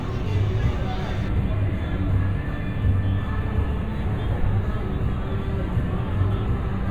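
An everyday sound recording turns hollow and slightly dull from 1.28 s to the end at 6.90 s, the signature of channel delay (comb filtering). One channel arrives a fraction of a millisecond late, which points to a lag of only a few samples. When the two are summed to mono, shared content cancels at evenly spaced frequencies starting around 5 kHz. On a spectrogram this appears as fixed dark horizontal bands, with the first near 5 kHz, that begin at 1.28 s.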